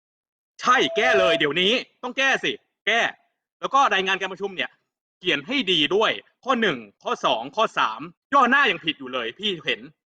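From 0.67 to 1.49 s the microphone is picking up the loudspeaker it feeds, and the loop gain rises above unity at 663 Hz. The result is loudspeaker feedback squeal: a single pure tone swells over roughly 0.4 s until it sits about 5 dB above the speech.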